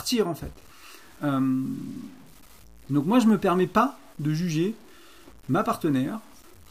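From 0.41 s to the end, the speech turns gritty, with grain that rises and falls with the voice and sputters on quiet tails. The likely cause is low bit depth without dither, consistent with 8-bit truncation, leaving error around 30 dB below the speech. Unlike steady dither hiss, it stops in silences.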